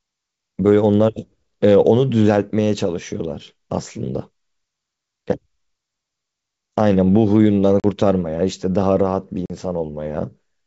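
At 7.80 s and again at 9.46 s, packet loss on an ADPCM call cuts about 40 ms of speech, roughly a couple of packets. Each gap is hard-edged silence. The decoder's predictor and step size then drift from the sender's, so speech returns with brief distortion.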